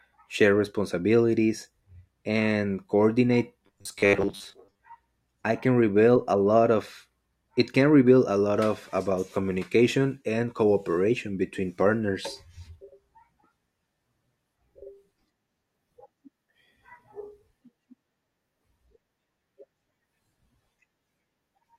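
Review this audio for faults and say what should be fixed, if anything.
From 3.67 to 4.81 s the speech turns into a rigid 100 Hz metallic buzz, robotic sound from repeated short buffers. The likely cause is late-arriving audio being filled by looping a 10 ms block, with roughly half the signal replaced by repeats. Prevent it by enlarging the jitter buffer or giving the audio thread higher scheduling priority.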